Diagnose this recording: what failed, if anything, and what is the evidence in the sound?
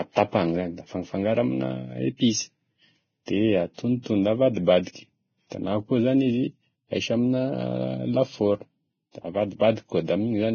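The codec stage failed: the speech was likely squeezed through Vorbis compression at very low quality. Nothing is present above 6.6 kHz, and the remaining treble is heavily damaged, turning hissy and grainy with roughened tones throughout. That level of damage fits a bitrate of roughly 18 kbps.

The same transform codec causes pre-echo at 4.02 to 4.06 s. A short hiss lasting about 36 ms arrives just before a sharp onset, and the attack sounds smeared. Quantisation noise sized for the loud attack spread across the whole block, including the quiet moment ahead of it.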